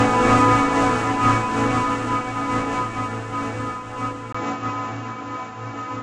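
At 4.33 s, after a brief 20 ms gap, the audio turns duller and stays that way through to the end. Nothing comes through above about 7.6 kHz from there on, the level shifts by a few dB, and a new background noise sits well under the signal, somewhere around 45 dB down. That's likely an input switched to a poorer device mid-recording, a narrower-band mic or headset path bringing its own tone, level and noise.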